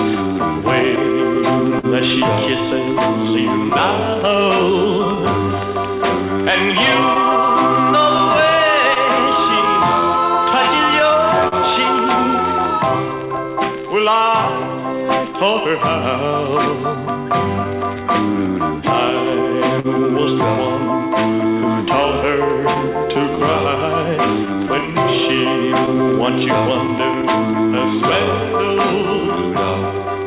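Clock drift between sender and receiver runs through the whole clip. The sender's clock is roughly 2% slow, so the receiver's buffer keeps draining.

Repeated timing corrections run from 0.34 s to 30.25 s. The receiver stretches short pieces, playing at 99% speed and adding about 300 ms overall.

Scattered short gaps appear between 0.96 s and 11.55 s. Around ten late packets were patched by continuing the last sound, the longest around 50 ms.

A short stall from a late packet follows at 19.80 s to 19.87 s. The buffer ran empty, and the last sound was held 44 ms too long.

More scattered short gaps occur between 22.74 s and 29.40 s. There are around seven, each very brief, about 10 ms at most. They fall in audio that, through G.711 mu-law, has nothing above 4 kHz.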